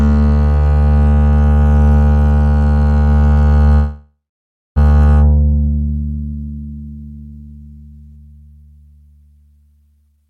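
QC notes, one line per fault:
3.74–4.78 s, call audio freeze: packets were likely held up and the jitter buffer emptied, so the music trails off into silence, then resumes where it stopped.
9.95–10.27 s, jitter buffer speed-up: the receiver cut short pitch-period slices, roughly 150 ms in all, to shed backlog, so the music runs at 145% speed, same pitch, tempo rushed.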